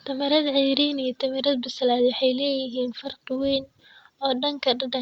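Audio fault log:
Nothing stood out on listening to this speech recording.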